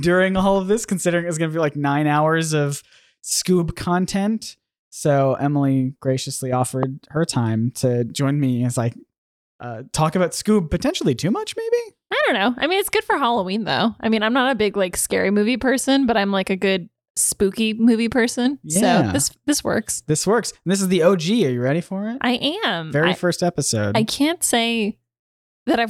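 A single loud pop lands at 6.83 to 6.85 s, a sharp transient standing roughly 15 dB above the surrounding audio, which carries on underneath; likely a voltage spike from a plug, switch or static discharge.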